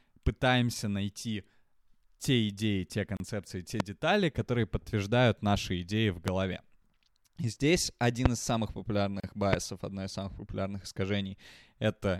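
At 3.17 s the speech drops out for 32 ms. This is a gap at a join of encoded pieces. Separately encoded sections were spliced without trimming their padding, so silence sits between them. The codec smears the edges of the gap.

At 3.80 s a loud pop lands on the speech, roughly 20 dB above it. The speech continues underneath. More pops follow at 6.28 s and 8.26 s. Each is a single sharp burst, likely from an electrical transient such as a switch, static or a driver glitch.

At 9.20 s a second join gap opens, lasting 34 ms. It falls six seconds after the first, the spacing of the encoded pieces.

At 9.53 s a final pop of similar strength cuts through.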